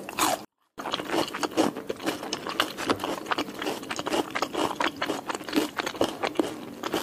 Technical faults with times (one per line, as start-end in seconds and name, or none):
0.45-0.78 24-bit alignment error (too quiet)